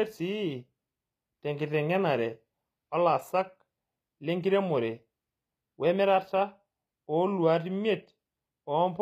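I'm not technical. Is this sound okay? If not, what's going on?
No. Throughout, the speech has gritty, metallic s sounds, likely from HE-AAC compression, which rebuilds the treble by copying from lower pitches, so it stays bright rather than going muffled.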